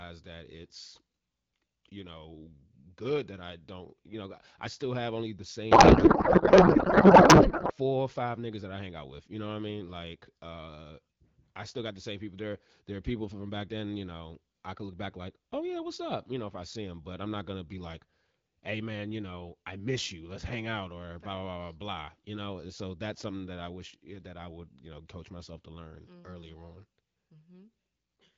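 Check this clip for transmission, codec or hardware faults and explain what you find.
One fault is present, a codec payload misread, over the AMR wideband (HD Voice) link.

Codec payload misread, 5.71 to 7.72 s, between "still have only the" and "or five niggas that". The two ends disagreed on how the AMR frame bits were packed. The sound fits octet-aligned frames being unpacked as bandwidth-efficient ones, so every field was read from the wrong bit positions. For those two seconds the speech gives way to garbled noise and warble that barely tracks it, then clears once the packing agrees again.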